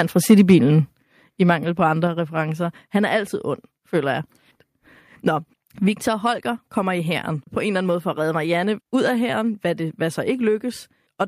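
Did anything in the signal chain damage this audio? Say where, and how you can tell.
Yes, at the converter first. From 0.3 to 0.55 s the peaks go flat-topped and crackly, pushing about 3 dB past full scale on a small fraction of samples. That's microphone overload, likely from the mic input gain being set too hot.

Then at 1.02 s the whole level, voice and background together, drops by about 6 dB in a single step. That's the microphone volume being stepped down, likely by the call processing reacting to the clipped peaks just before it.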